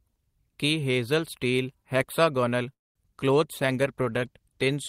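A call audio freeze at 2.73 to 2.96 s stops this speech for about 0.23 s, mostly silence. Packets were likely held up in transit until the jitter buffer ran dry, after which the audio resumes where it left off with nothing lost. A call bitrate drop from 3.59 s to the end cuts the encoder from 32 to 18 kbps, bottoming out for about 1.1 s, so the coarser coding sounds rougher and duller.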